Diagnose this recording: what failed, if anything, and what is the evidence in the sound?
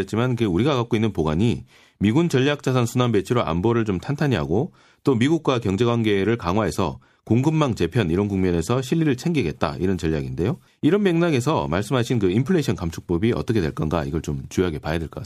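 Nothing failed here as far as I can hear; the speech comes through without any dropouts, glitches or other faults at any point in the recording.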